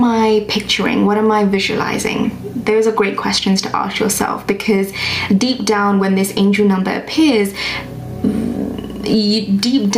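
Gain pumping runs through the whole clip. The level swings by around 10 dB as it breathes up and down. Loud and quiet parts sit unnaturally close together, so the sound feels squashed. The likely cause is input gain set far too high, with a fast limiter or compressor clamping down on each peak and releasing between them.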